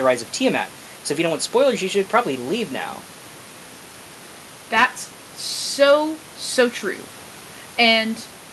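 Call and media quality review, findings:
No faults found in this speech clip. Room noise sits about 24 dB below the speech, and the top end stops near 12 kHz, which fits an Opus call path at around 64 kbps working as intended.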